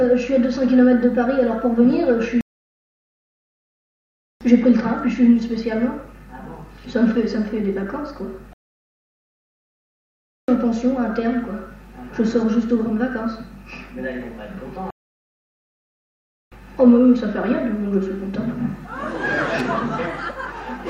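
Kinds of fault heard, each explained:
Playback stall: sound halts three times, for 2.0, 1.95 and 1.61 s, unlike brief dropouts; likely data starvation.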